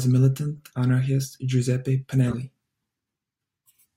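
Speech with two spans of corrupt frames decoded: at 0.56–0.63 s and 2.27–2.34 s, damaged compressed data was played anyway, giving short chirpy noise bursts, the first peaking near about -15 dBFS. Wrong-frequency energy replaces the sound instead.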